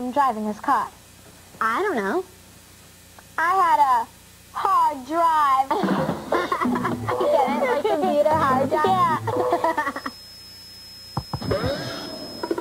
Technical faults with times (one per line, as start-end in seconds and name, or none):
9.87-12.60 feedback whistle